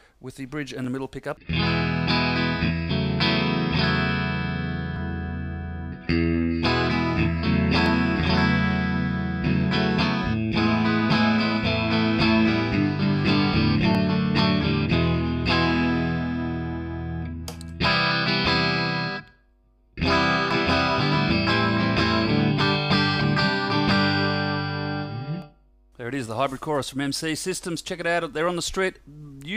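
Dropped samples at 0.84, 7.86, 13.95, 20.51, 25.42 and 26.27 s: each is a single sharp click, likely from under a millisecond of audio missing, making the waveform jump.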